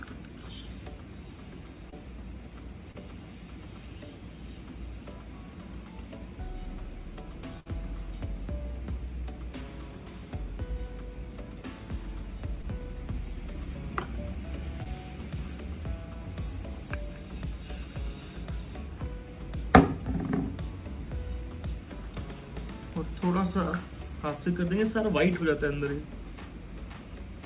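Short concealed packet loss shows up around 1.90–1.94 s and 2.92–2.96 s: about 20 ms never arrived, and the receiver papered over it by extending the last sound, leaving a quick smear or wobble. At 7.60–7.68 s there's a burst of packet loss, roughly 60 ms gone, with the held sound fading out before the audio picks up further along. Two more short concealed losses land at 12.62–12.65 s and 14.83–14.87 s. They're the same 20 ms patch-ups and the same brief wobble, all riding on a band that stops at 4 kHz, which fits a G.711-style narrowband call.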